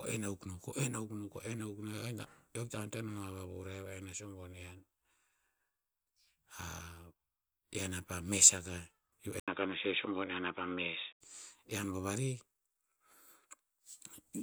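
Speech that goes dull and boxy from 9.40 to 11.21 s, losing everything above 3.8 kHz, with an 80 ms gap at the switch, a faint new background noise and no change in level. The likely cause is an input switched to a poorer device.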